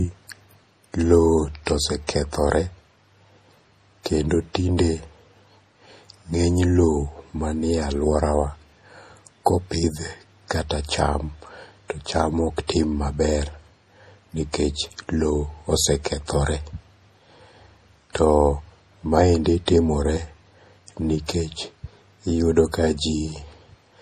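Throughout, the speech was likely squeezed through MP3 compression at a low bitrate, around 40 kbps. Nothing survives above 15.2 kHz, and the sound turns watery, with swirling, chirpy s sounds. Pre-echo occurs at 2.07 s, from 12.67 to 12.69 s, and from 19.66 to 19.68 s. Quantisation noise spreads backward across each transform block, so a short hiss of about 18 to 21 ms leads each sharp onset and softens it.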